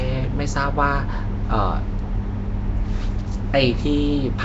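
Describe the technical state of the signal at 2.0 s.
At 2.0 s, as throughout, the speech sounds rough, hissy and smeared, with nothing above 7.7 kHz. The likely cause is Nellymoser compression, which fills starved bands with noise.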